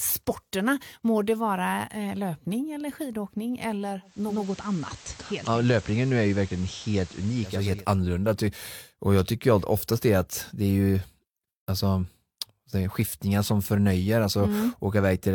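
Just after "löpning eller skidåkning eller", at 4.01 s, a digital radio blending to analogue occurs: the receiver cross-fades over 490 ms to the FM signal until 7.88 s. Hiss rises roughly 20 dB below the speech, and the level drops about 3 dB.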